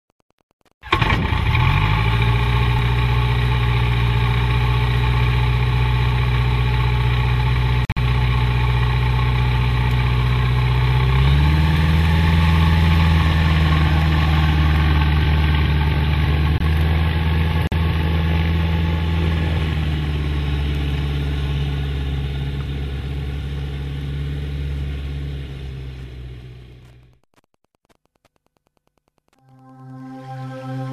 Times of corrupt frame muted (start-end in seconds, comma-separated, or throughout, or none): 7.85-7.98, 16.58-16.62, 17.67-17.74, 27.88-27.91